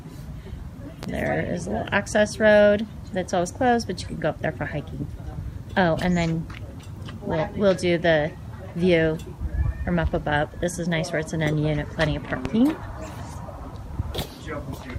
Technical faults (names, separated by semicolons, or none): loud pop